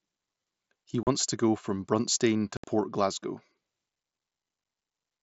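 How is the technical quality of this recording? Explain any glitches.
Two short dropouts stand out, both unconcealed Bluetooth headset packet loss: 1.03 to 1.07 s (37.5 ms) and 2.57 to 2.64 s (67.5 ms). Packets on the mSBC wideband link between headset and phone never arrived and nothing patched them, so the speech just cuts to a hard-edged gap. The lengths point to roughly five and nine lost packets.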